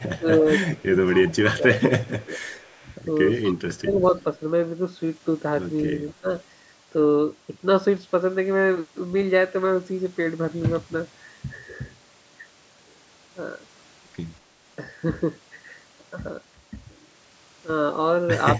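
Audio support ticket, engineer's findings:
Echo leak, 0.00–0.09 s, 0.62–1.35 s, 2.05–2.96 s, 3.43–3.52 s. Delayed copy of the speech trailing by 244 ms, roughly 15–30 dB under the direct signal, weakest at 2.05–2.96 s. Likely residual echo from a far-end loudspeaker the canceller didn't fully subtract. Spectrogram: faint duplicate of the formant pattern shifted 244 ms right. Waveform: low-level tail after each burst.

Speech suppressed in double talk, 0.18–0.46 s, 0.86–2.33 s, 3.50–4.15 s, 6.13–6.28 s. Near-end speech dips and chops while the other side talks. Drops of roughly 15–20 dB, deepest around 35 dB at 3.50–4.15 s. Likely echo-canceller suppression attenuating both paths during overlap. Waveform: envelope notches and gaps. Spectrogram: energy columns thinning or vanishing in patches, under a band edge at 8 kHz from the call microphone processing.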